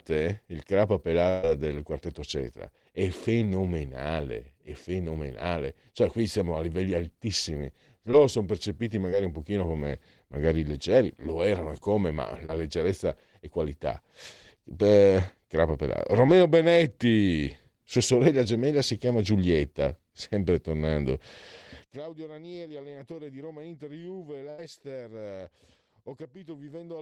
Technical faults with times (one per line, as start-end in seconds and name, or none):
1.29-1.45 burst of packet loss
8.11-8.15 short concealed packet loss
9.11-9.14 short concealed packet loss
12.46-12.50 short concealed packet loss
16.26-16.30 short concealed packet loss
21.84-27.01 one channel inverted
22.68-22.72 short concealed packet loss
24.50-24.60 burst of packet loss